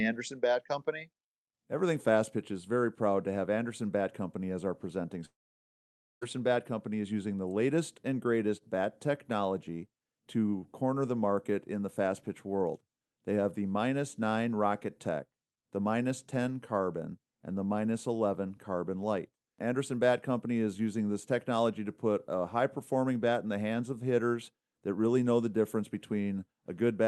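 From 5.25 s to 6.23 s the speech stops for just under a second, the mark of a likely long network dropout: packets stopped arriving, and the receiver had nothing to play. It briefly stretches the last sound into a fading buzz, then leaves almost 0.9 s of near silence before the speech resumes with that portion simply gone. Around it, the call path's coding keeps the top end cut off near 12 kHz.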